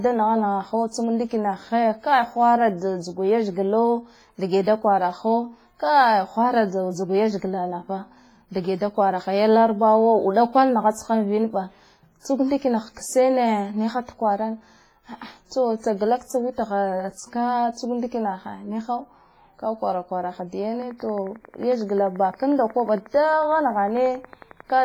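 WMA compression, likely the cause of the damage heard throughout the speech, leaves heavy codec artefacts. A transform coder at this level spends too few bits on each block, so its quantisation noise smears over tens of milliseconds and weak spectral detail drops out. The result rings and sounds washy, with hiss that swells and fades along with the speech. The degree of damage fits a bitrate around 24 kbps, and nothing is present above 21.4 kHz.

Pre-echo appears at 12.20 to 12.25 s, spread over 54 ms before a sharp attack. The codec distributes its noise evenly across a whole block, so when an onset lands late in that block, noise sized for the loud part also fills the quiet gap ahead of it. A brief hiss runs in front of the attack, which sounds softened and smeared rather than crisp.

A train of clicks starts at 20.82 s, just after "kwaraha da", and lasts until 24.80 s. About fifty similar pulses arrive at a regular 11.1 per second, each peaking at about the level of the speech itself. 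The evenly paced, near-identical pulses suggest interference or a faulty connection or power supply as the likely source. They are heard as a steady ticking laid over the speech and through its pauses.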